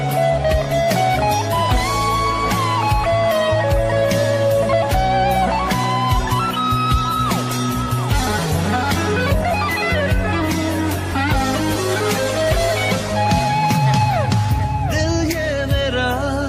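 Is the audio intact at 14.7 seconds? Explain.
Yes, the audio at 14.7 seconds is intact, with no dropout, click, distortion or other fault at that point.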